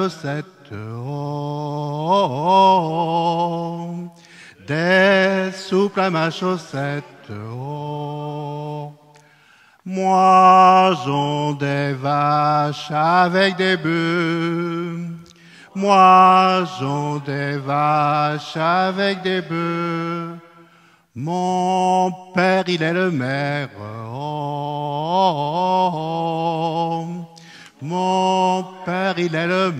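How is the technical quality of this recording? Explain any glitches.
No glitches are audible anywhere in the recording.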